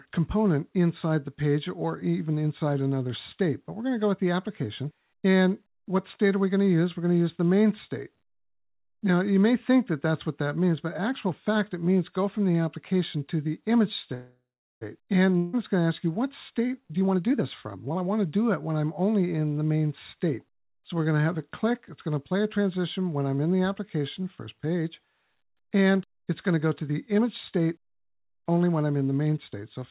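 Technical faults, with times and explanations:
14.14–14.83 s, call audio freeze: the sound stalls and the last moment is stretched into a fading buzz that reaches silence for about the final 0.4 s. The likely cause is delayed packets emptying the jitter buffer. Play then resumes exactly where it stopped, so nothing is skipped and everything after arrives 0.67 s later. That distinguishes it from a dropout.
15.37–15.55 s, long network dropout: a fading hiss fills about 0.16 s, likely where packets never arrived. Unlike the freeze before it, the audio comes back further on. Roughly 0.16 s of material is gone, so the sound jumps forward instead of merely pausing.
16.50–18.26 s and 25.74–28.93 s, jitter buffer speed-up: pitch-period slices are repeatedly cut to drain a backlog, so the audio hurries along at unchanged pitch. The first stretch runs at 125%, losing about half a second. The second runs at 107%, losing roughly 0.2 s. 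It is steady compression rather than a single jump.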